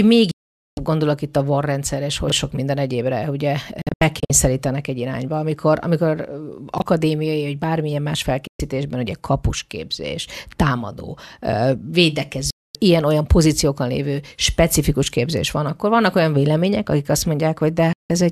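Speech cuts abruptly to silence at 0.31–0.78, 8.47–8.60, 12.50–12.75 and 17.93–18.10 s, and breaks into several short holes between 3.82 and 4.30 s. This is digital broadcast dropout: the receiver muted with a 3 ms fade while frames were lost. Brief jumbles at 2.28–2.32 and 6.78–6.82 s are chunks out of order, where a 20 ms chunk played one slot late.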